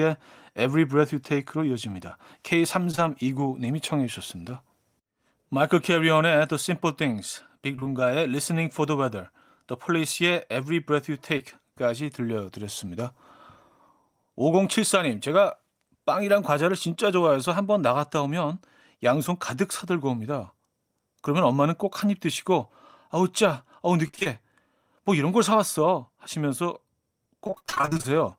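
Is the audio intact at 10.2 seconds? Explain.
Yes, the speech at 10.2 seconds plays through cleanly, with no dropout, click, distortion or other technical fault at that point.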